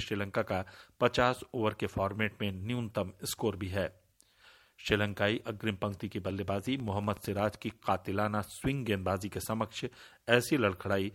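From 6.27 to 7.71 s, about fifteen similar pops tick unevenly at 10.5 per second over the sound: a train of clicks, likely from interference.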